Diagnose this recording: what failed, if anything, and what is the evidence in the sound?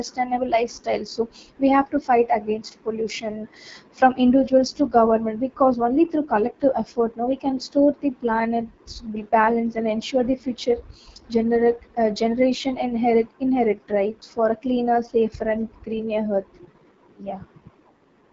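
AMR wideband (HD Voice) codec throughout, codec stage: raspy, rough speech with nothing above 7.5 kHz, pointing to a starved low rate near 8.85 kbit/s.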